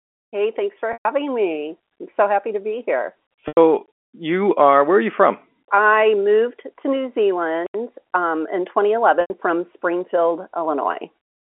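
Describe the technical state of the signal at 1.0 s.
Packet loss with pitch repetition runs from 0.93 to 1.05 s, a 120 ms gap that fits roughly four lost 30 ms packets. The receiver loops the last pitch period, which buzzes briefly and fades to silence before the speech cross-fades back in.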